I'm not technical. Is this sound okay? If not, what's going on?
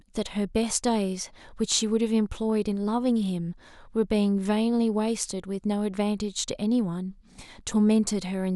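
Yes, nothing in this speech recording stood out as a problem when listening to it.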